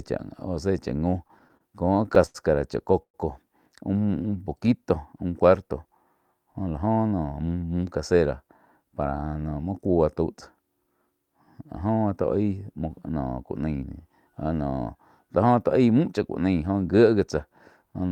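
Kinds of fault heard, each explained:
Repeated stalls (stutter): packets kept arriving late, so the jitter buffer emptied eleven times between 0.99 and 2.36 s, and the held-over sound drags and stutters, with gaps of up to 85 ms.
Call audio freeze: packets were likely held up in transit and the buffer ran dry, so at 3.02 s the sound buzzes briefly, then drops into about 80 ms of silence before resuming.
Jitter buffer slow-down: a buffer running low was refilled by repeating pitch periods, so from 4.02 to 4.67 s the speech stretches to 91% speed at unchanged pitch.
Jitter buffer speed-up: an overfull buffer was trimmed by cutting short pitch periods, so speech hurries at unchanged pitch, at 115% from 6.60 to 7.56 s and 112% near the end.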